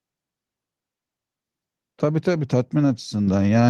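A microphone volume step-up occurs at 3.27 s: the call software raised the input gain in one jump, so speech and background both become louder together, by about 6 dB.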